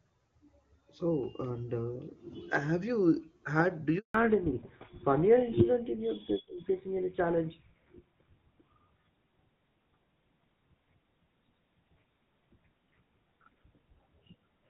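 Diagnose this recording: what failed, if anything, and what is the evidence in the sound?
Network stage: a handover gap silences the speech from 3.98 to 4.14 s. For 160 ms no frames arrived while the call switched links.

Codec stage: fallback to narrowband removes everything above 4 kHz from 4.14 s onward. The duller, rougher speech fits a drop from HD Voice to GSM full rate.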